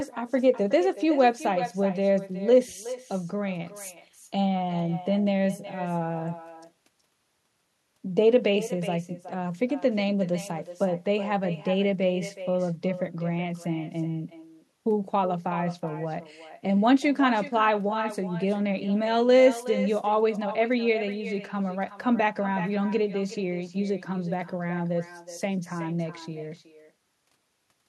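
Throughout, echo with no canceller returns each phrase roughly 400 ms later, about 13 dB quieter and thinner, a distinct repeat rather than smeared room reverberation.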